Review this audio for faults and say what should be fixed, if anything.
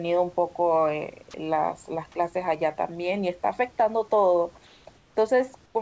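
Sound dropped by the voice detector at 1.31–1.34 s: about 20 ms of speech gives way to steady noise, likely because the detector misread a quiet passage as background. Fix it by lowering the detector's threshold or adding hangover time.

Comfort noise in place of the background at 4.67–4.85, 4.97–5.15 and 5.66–5.75 s: the room background becomes featureless synthetic noise about 1 to 4 dB quieter, likely from discontinuous transmission. Fix it by disabling discontinuous transmission or improving the comfort noise's spectral match.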